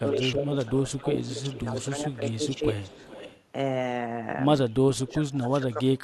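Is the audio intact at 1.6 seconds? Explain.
No. Speech suppressed in double talk runs from 0.00 to 2.66 s. With both sides likely talking at once, the echo canceller turned the near voice down along with the echo. The voice dips by up to about 15 dB and loses strength for roughly two seconds in total.

An echo leak overlaps it from 1.47 to 3.42 s. A copy of the voice returns 426 ms late, about 20 dB below the speech. It likely comes from a loudspeaker on one side whose canceller let some of the pickup through.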